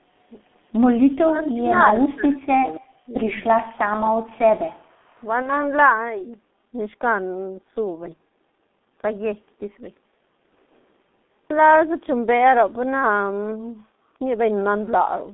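A speech recording carried over a G.723.1 codec throughout, with the line passing only about 200 Hz to 3.6 kHz and heavy coding damage consistent with a rate near 6 kbit/s. The coarse 30 ms frame model leaves the speech muffled and hoarse, with smeared consonants. From 5.42 to 5.52 s there is VoIP packet loss concealed by the speech codec: the decoder filled the gap by extrapolating its last pitch and filter, which fits a single lost 30 ms frame. That stretch turns into a fading smear, and the speech stays weak or distorted briefly after it.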